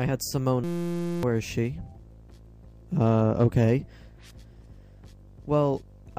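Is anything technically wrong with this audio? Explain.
Yes. From 0.64 to 1.23 s there is a system hang loop: the system stalled while the hardware kept replaying a 5.8 ms buffer, which fits a 256-sample buffer. It sounds like a steady 172 Hz buzz, and roughly 0.7 s of real audio is lost.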